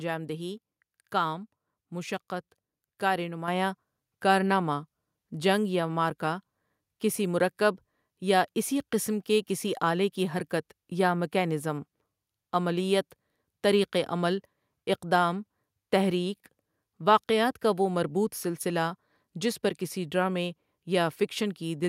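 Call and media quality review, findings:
Microphone volume stepped up at 3.48 s: voice and background jump together by about 6 dB in one step. Call app's input gain control raised the mic level.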